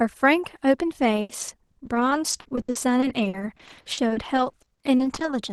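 A speech recording with repeated packet loss, which gives it a robotic sound from 1.21 s to 5.33 s. Dozens of short holes break up the voice across that stretch. The longest lasts about 80 ms. Each hole is filled by stretching the sound just before it, so the voice turns choppy. Roughly a quarter of that span is patched this way, about a second of missing audio in total. The call path's Opus coding, band-limited to around 12 kHz, sits underneath.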